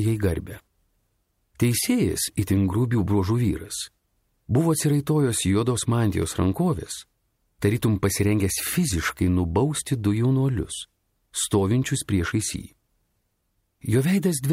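At 6.23 s the audio jumps forward. Nothing falls silent. Roughly 10 ms of sound is missing, and the two sides butt together. The likely cause is a dropped buffer (overrun), where samples were overwritten before the program collected them.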